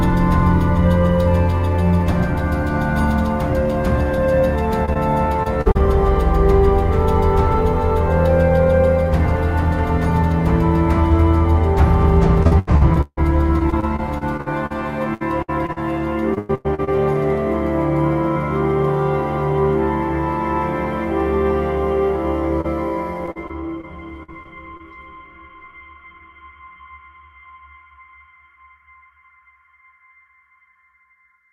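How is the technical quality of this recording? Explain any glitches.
The recording has packet loss: three choppy, robotic-sounding stretches and one brief isolated dropout.

Repeated packet loss (robotic sound) occurs at 4.85–5.77 s, 12.43–16.89 s and 23.26–24.81 s. Packets kept going missing, and each hole was patched by stretching the preceding sound. The middle stretch is about 23% patched, with gaps up to 156 ms, so it sounds stuttering and broken.

Short concealed packet loss occurs at 22.61–22.66 s. About 20 ms of audio never arrived in time. The receiver covered the hole by continuing the last sound, then blended back into the real signal, leaving a brief smear or wobble.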